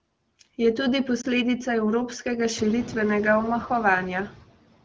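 Noise suppressor artifacts run through the whole clip. The suppressor cuts what it judges to be steady noise by about 18 dB, band by band and frame by frame. The background sinks between phrases and swells back under the speech, more so once the room noise rises at around 2.5 s.

From 1.21 to 1.26 s, just before "evropskega širitvenega", a corrupted radio frame was discarded. This fits a single lost 20 ms AMR speech frame. The decoder filled the gap by repeating the previous frame's settings at reduced gain, which is heard as a brief dip or warble in the speech.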